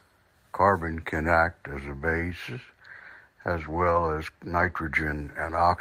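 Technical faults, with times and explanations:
1.99 to 2.01 s, lost packet rebuilt from error correction: a brief 20 ms patch of rougher, noisier speech with no gap. A single packet went missing, and the decoder played the low-bitrate copy carried in the following packet instead.
3.59 to 3.97 s, lost packet rebuilt from error correction: a longer 200 ms stretch of grainier, noisier speech that still runs continuously. The length fits about ten separate 20 ms packets lost, each replaced by its coarse in-band backup copy.
4.57 to 4.71 s, lost packet rebuilt from error correction: an 80 ms rough, noisier section with no dropout, consistent with roughly four lost packets. The decoder filled them from the low-bitrate duplicates in the next packets, so the sound continues at reduced quality.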